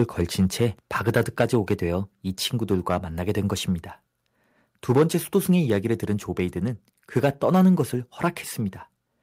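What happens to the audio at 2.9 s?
At 2.9 s the speech breaks up with a harsh, crackling edge. This is microphone overload, heard from 2.72 to 2.98 s. The loudest peaks there push about 5 dB beyond the converter's ceiling. Their tops are flattened instead of rounded, and that squaring adds the gritty distortion. Only a small share of samples is cut, around one or two percent, so the damage is brief. The likely cause is input gain set too high.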